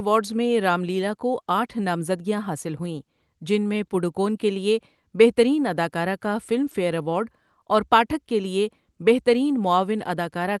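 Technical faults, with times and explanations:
Nothing here stands out as a technical problem; it just has the ordinary sound of audio that came over a call link, with the top end stopping at about 12 kHz.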